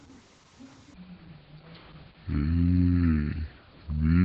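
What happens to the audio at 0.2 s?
At 0.2 s you're hearing Opus voice compression, and it isn't a one-off: it runs through the whole speech clip. The encoder is in its SILK linear-prediction mode, so it models the voice as a filter plus a coarsely coded excitation, and nothing above 8 kHz survives. The damage is heavy and sounds like a bitrate around 10 kbps. The voice comes across muffled, hoarse and a little robotic.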